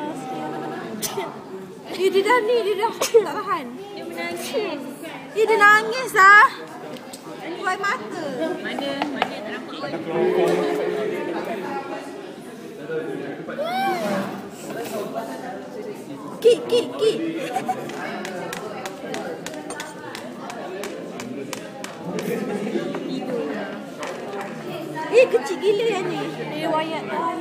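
The audio stutters three times from repeated frames. At 0.55 s a block of about 93 ms plays twice more, running to 0.74 s. At 4.84 s a 70 ms block repeats once, ending at 4.91 s. At 15.81 s a 93 ms block repeats once, ending at 15.90 s. Each block length fits a short run of compressed frames, three or four, written more than once. The decoder replays the same slice, so the sound hiccups and the clip runs slightly longer.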